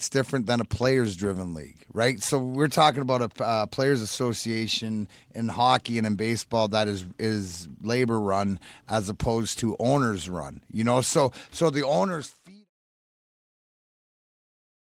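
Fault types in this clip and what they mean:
No technical faults can be heard in this speech recording, and its only level change is a gentle, deliberate taper at the end that begins around 11.5 s and is complete by 12.7 s, with no click or hard edge.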